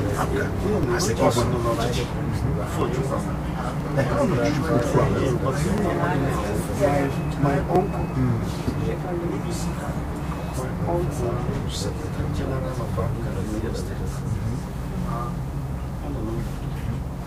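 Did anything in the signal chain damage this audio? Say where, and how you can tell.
Yes. The damage happens at the network stage, as overlap between stream segments. There are small clicks or skips at 0.83, 2.81, 3.80, 4.80, 5.78, 6.77 and 7.76 s. Each is a sudden jump in the waveform rather than a dropout. They fall on roughly one-second boundaries, which fits one-second stream segments. Adjacent segments carried overlapping time stamps. The player trimmed the overlap, discarding 5 to 16 ms of sound that was never actually duplicated.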